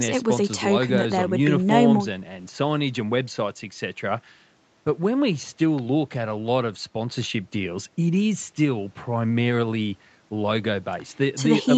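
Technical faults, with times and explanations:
No faults; the audio stops at 8 kHz and has the light coding texture of a normal call path, consistent with Opus at around 48 kbps.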